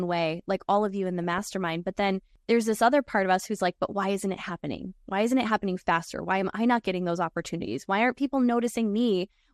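Throughout the speech there is plainly audible MP2 compression, likely from a low bitrate around 80 kbps. Upper sub-bands switch off and flicker, giving a dull, gurgling grain. On a spectrogram the top end looks ragged, with blocks appearing and vanishing.

From 1.24 to 1.49 s, DAB burbling erupts as bit errors reach the audio data, corrupting what fits about a dozen frames. Short blips of noise land in single sub-bands. A spectrogram shows isolated bright horizontal bars, and the waveform shows brief irregular bulges.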